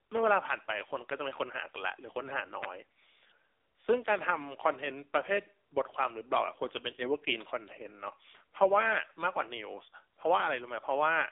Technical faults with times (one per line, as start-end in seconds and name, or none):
0.00-11.31 AMR narrowband mobile codec
2.63 electrical switching spike